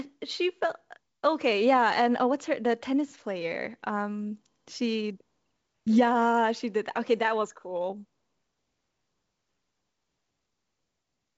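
Nothing stood out on listening to this speech, which carries the sound of G.722 wideband telephone coding at 64 kbit/s with no content above about 7.7 kHz.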